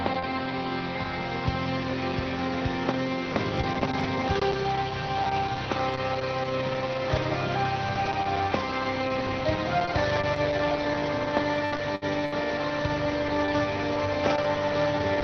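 The audio passes through a call codec. It is cut off above 6 kHz, with coding noise that fits Opus at around 20 kbps. At 11.65 to 11.75 s there is a short stall from a late packet. The jitter buffer ran dry, so the sound is held for about 61 ms, then resumes without losing anything. From 11.72 to 11.78 s, a lost packet was rebuilt from error correction. The next packet carried a low-quality copy, so 60 ms plays without a gap but sounds rougher and noisier. Two bursts of packet loss follow, at 11.96 to 12.05 s and 12.26 to 12.35 s. Each time the last sound is stretched into a fading buzz or hiss, and 60 ms of audio is missing when playback resumes.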